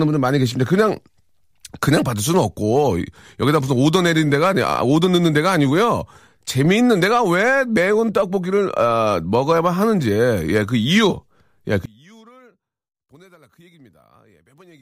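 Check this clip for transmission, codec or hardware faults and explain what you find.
One fault stands out. From 11.86 s onward, the speech falls about 31 dB to a faint trace. The likely cause is one channel inverted, cancelling the shared centre in mono.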